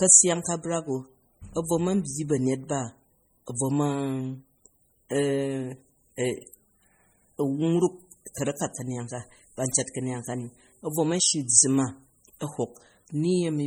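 It's a speech recording, and the whole thing carries heavy MP3 compression damage, most likely from an encode at a very low bitrate, around 32 kbps by the sound of it. The audio has that watery, swirly quality you get when the encoder runs short of bits and weak frequency lines flicker on and off from frame to frame, and attacks come out smeared. The top end stops dead at about 20.9 kHz.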